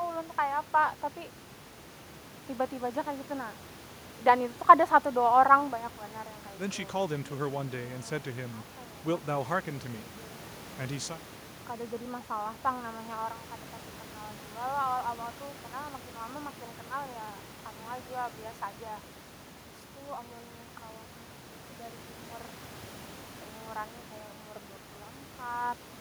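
It's a speech recording with nothing technically wrong, just a bit of ordinary room background sitting about 16 dB below the voice.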